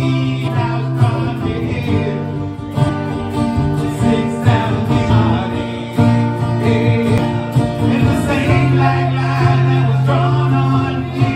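There are four short chirps or blips from damaged data in a compressed stream, at 0.47 to 0.49 s, 2.88 to 2.90 s, 5.09 s and 7.18 s. Bad bytes there make the decoder misread those frames and lose sync until it finds the next frame header.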